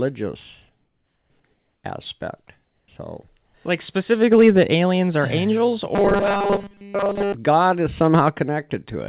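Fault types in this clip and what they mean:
Comfort noise in place of the background: In the gaps at 0.84, 1.54, 2.64 and 3.46 s, the real room tone drops out and a flat, featureless hiss sits there instead, about 2 to 4 dB quieter. That's likely the sender going silent between phrases while the receiver fills in synthetic noise.
Robotic sound from repeated short buffers: From 5.95 to 7.34 s the speech turns into a stiff metallic buzz at 200 Hz, which fits a 5 ms chunk being looped over and over. Most of that stretch is repeats, likely because fresh audio wasn't arriving in time.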